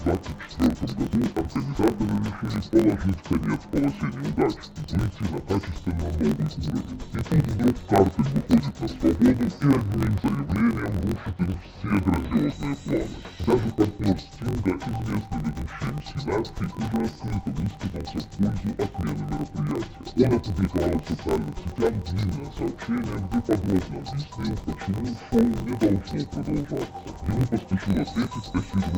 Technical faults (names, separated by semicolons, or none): interleaved audio read as planar